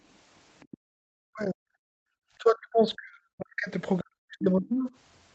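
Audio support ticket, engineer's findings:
Other side's voice leaking through, 0.6 to 0.77 s: residual echo likely passing the echo canceller. Far-end loudspeaker audio reaching the mic not fully subtracted. Symptom: faint second voice underneath, well below the talker, on the order of 25 dB down. Brief. Probable component: AEC linear filter not converged or misaligned against the playback reference, so part of the echo survives into the send path.

Background gated by the echo canceller, 0.77 to 0.93 s: AEC nonlinear stage clamping mic gain hard right after the leaked echo. Room tone collapses by about 40 dB for roughly 150 ms, then snaps back. Component: residual echo suppressor applying full attenuation while it judges the far end active.

Speech suppressed in double talk, 1.21 to 2.15 s, 2.39 to 3.71 s, 4.02 to 4.9 s: double-talk detector likely failing. With both sides active, the canceller treats near-end speech as echo and attenuates it. 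Talker's level drops in pieces, in places by around 40 dB. Roughly one second affected in the first span, one and a half in the second, under a second in the third.

Opus call path at 32 kbps, band-limited to 8 kHz.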